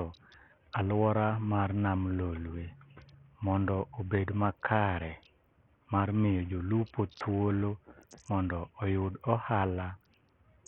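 From start to finish the speech sounds dull and gritty, with the treble flickering in and out and a rough, grainy noise riding on it. The likely cause is heavy Bluetooth SBC compression, with a thin bit budget that fits roughly 48 kbps, starving the upper sub-bands.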